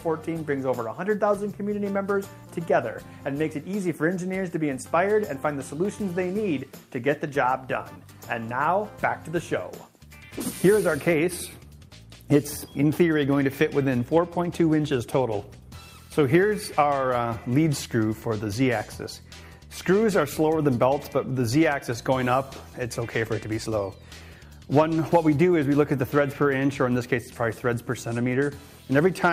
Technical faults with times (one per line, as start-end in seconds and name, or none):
none